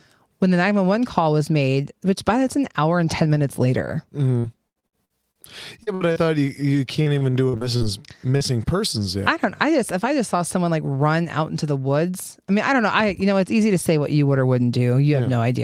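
Repeated packet loss (robotic sound) affects this speech clip at 4.39–5.39 s, 5.83–6.28 s and 6.97–7.84 s. Holes follow one another closely, each patched by extending the last sound, so about a quarter to a third of each stretch is filled-in audio. The longest hole is 78 ms. Short concealed packet loss at 8.37–8.43 s leaves a brief 40 ms smear where the receiver continued the preceding sound and blended back into the real audio. Jitter buffer speed-up at 10.06–10.78 s runs the audio at 105% speed without changing pitch, because the receiver trimmed a few hundredths of a second in small pitch-period pieces to reduce excess buffered delay.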